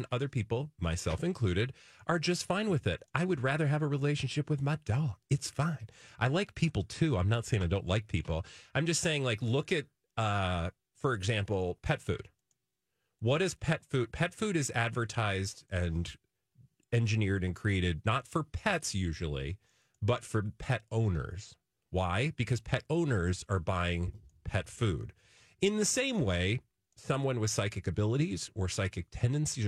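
No technical faults are audible.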